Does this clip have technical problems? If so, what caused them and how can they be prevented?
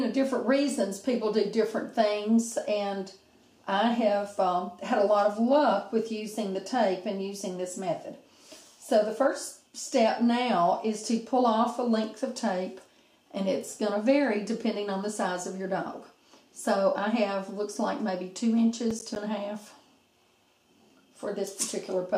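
Yes. Processor overload crackle runs from 18.91 to 19.16 s. Repeatedly missed buffer deadlines left a handful of silent gaps of roughly 10 ms, whose hard edges appear as vertical broadband streaks on a spectrogram and abrupt notches in the waveform. Lowering processing load or enlarging the buffer prevents it.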